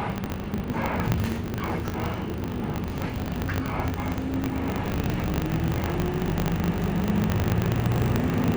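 Throughout, a filter restarted on every block clicks at each block start, producing a 50 Hz buzz tracking level, seen as evenly spaced vertical spectrogram stripes.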